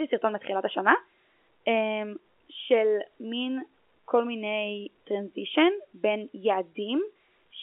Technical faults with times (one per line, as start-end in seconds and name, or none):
none